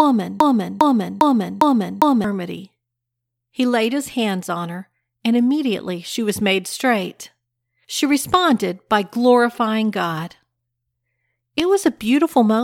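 From the very start until 2.24 s, a 0.40 s fragment repeats exactly five times, a broken-record loop, likely from a stalled stream resending its last buffer.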